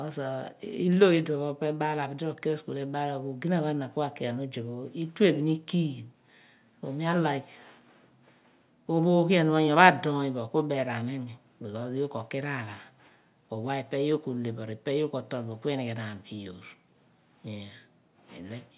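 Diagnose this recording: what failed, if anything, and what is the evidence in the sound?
Nothing in the chain has failed: from capture through to playback the speech carries no audible defect at any stage.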